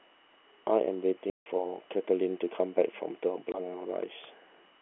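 Packets were lost in transit and the receiver played silence in their place: packet loss filled with silence. At 1.3 s the speech drops out completely until 1.46 s, a 160 ms hole that fits eight consecutive 20 ms packets going missing. A second, single-packet gap follows from 3.52 to 3.54 s. Both holes start and end abruptly. The G.711 telephone band, 300 Hz to 3.4 kHz, can be heard around them.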